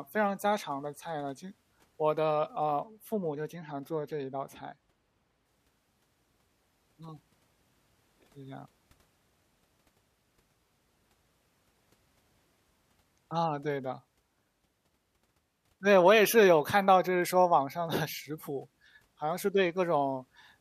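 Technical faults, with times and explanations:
2.80 to 5.46 s, de-emphasis applied wrongly: the speech turns dull and muffled because a treble-cut filter meant to reverse pre-emphasis acts on audio that never had it or acts twice, sloping the response down smoothly to about 8 dB lower at 10 kHz than at 1 kHz.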